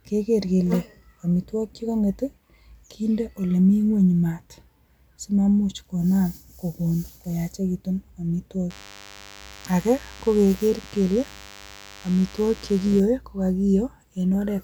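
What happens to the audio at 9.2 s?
At 9.2 s the speech carries DECT cordless phone buzz, running from 8.70 to 13.00 s. A nearby handset's radio bursts every 10 ms get rectified in the audio circuit, leaving a thin, steady 100 Hz buzz well below the speech. On a spectrogram it shows as evenly spaced horizontal harmonic lines.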